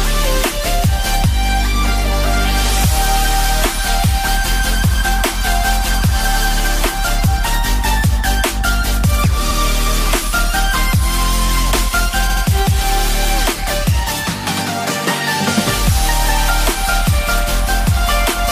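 At 9.50 s and 12.29 s, repeated frames: a compressed block replays, 93 ms once, then 70 ms twice more, heard as a stutter. Unlike a dropout, nothing goes missing; the audio grows by about 0.23 s.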